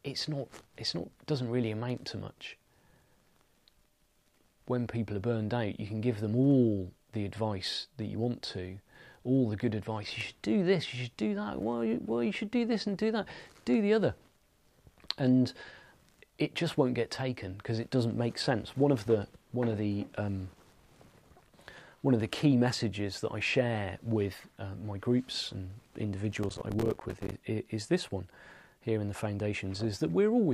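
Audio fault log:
26.32–27.37 s processor overload crackle: the processor fell behind, missing buffer deadlines dozens of times over the stretch, which fits buffers of around 5 ms. Each miss left a hard-edged silent gap, and together they sound like a burst of gritty crackle.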